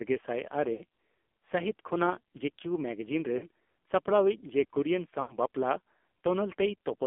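Throughout, the AMR narrowband mobile codec confines the speech to about 250 Hz to 3.5 kHz, and heavy low-bitrate coding, consistent with roughly 6 kbps, gives it a buzzy, synthetic quality. Lost AMR speech frames at 0.74, 3.38 and 5.22 s make the decoder extend the previous sound with decaying gain for 60, 40 and 80 ms, heard as brief smeared warbling dropouts.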